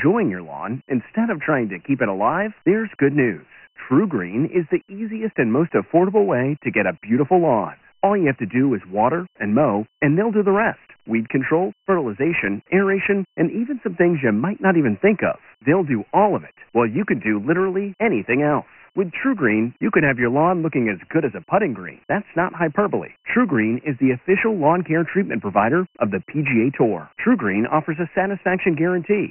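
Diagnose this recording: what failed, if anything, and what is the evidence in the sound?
The speech has passed through Dialogic VOX ADPCM for the whole clip, a codec-stage fault. Nothing survives above 2.9 kHz, and the lows are thinned below about 150 Hz, which suggests a 6,000-sample-a-second VOX file. A gritty hiss rides on every syllable and tracks its loudness. Coarse 4-bit step-size adaptation is heavily damaging the signal at roughly 24 kbps. On a spectrogram it shows as a hard ceiling with a grainy noise floor under the speech bands.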